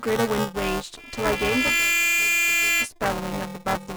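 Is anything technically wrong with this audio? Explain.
Yes, there are two faults. Buffer tearing runs through the whole speech clip: the writer and reader of a ring buffer have slipped, so about a fifth of each period repeats audio from around 10 ms earlier. Hard joins produce a rattling 345 Hz buzz, which fits a 128-sample buffer. A waveform shows regular discontinuities, and a spectrogram shows vertical striations and harmonic lines.

A loudspeaker feedback squeal runs from 0.97 s to 2.89 s. The microphone hears its own loudspeaker, and at 2.4 kHz the loop gain exceeds one, so that tone swells over roughly 0.7 s to about 5 dB above the speech. A spectrogram shows one bright horizontal line, and the waveform envelope grows.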